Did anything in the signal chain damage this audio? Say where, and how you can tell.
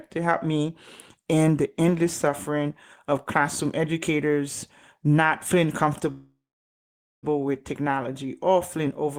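Yes. Network stage: a call audio freeze after "classroom educators not feeling", 6.11 to 7.25 s. A fading buzz, then silence. Speech resumes intact at "with technology or feeling". Likely delayed packets emptied the jitter buffer.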